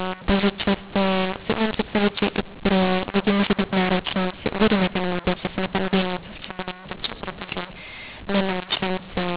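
The speech was coded with G.711 mu-law but decoded as A-law, a classic case of mu-law and A-law mixed up. The two companding curves map the same 8-bit codes to different amplitudes, so levels are scrambled throughout: some samples come out too loud, others too soft, and the quietest codes land well above silence. The speech sounds harsh and distorted, and pauses fill with noise, all within a telephone band that stops near 4 kHz, consistent with 8 kHz sampling.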